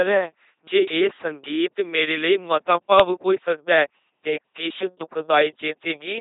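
A speech clip carrying LPC-10 vocoder damage from start to finish, heavy throughout, with the buzzy, mechanical robot quality that points to the 2.4 kbit/s LPC-10 scheme. Each stretch is rebuilt as either a pulse-driven buzz or pure noise through a simple vocal-tract filter. On a spectrogram, voiced parts show rigid, evenly spaced harmonics and smeared formants, unvoiced parts look like flat noise, and nothing appears above 3.8 kHz.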